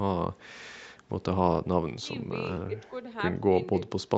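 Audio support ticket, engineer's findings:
No faults found on this speech clip. The call path is audible only as its normal band limit, with nothing above about 8 kHz, consistent with the call processing and codec bandwidth.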